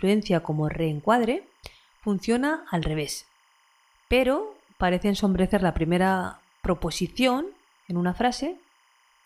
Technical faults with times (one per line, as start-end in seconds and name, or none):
0.00-9.25 timecode bleed